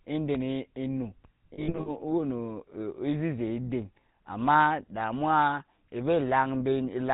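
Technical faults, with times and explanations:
throughout, GSM full-rate codec: gravelly, buzzy speech fitting 13 kbps GSM; the spectrogram stops sharply at 4 kHz, and the harmonics look smeared and grainy.
0.35 to 0.38 s, loud pop: a sharp pop over the speech, likely a voltage step from a plug or switch, showing as a spike a few dB above the waveform.
1.54 to 1.9 s, lost GSM frames: scattered gaps, each at most about 70 ms, are filled by repeating earlier frames, giving a metallic ring that shows as smeared, repeated spectrogram bands.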